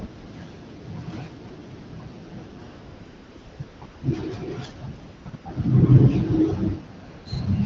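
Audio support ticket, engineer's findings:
AMR comfort noise: sender's voice activity detection halted speech frames; receiver synthesised smooth, steady noise from coarse level and spectrum parameters. Real background swapped out at 2.69–3.59, 3.63–3.81, 3.85–4.03, 5.03–5.25, 5.29–5.33, 5.35–5.45 and 7.09–7.25 s, longest gap 900 ms, noise switching in and out. Wideband coding keeps speech clear, consistent with AMR-WB around 12.65 kbit/s.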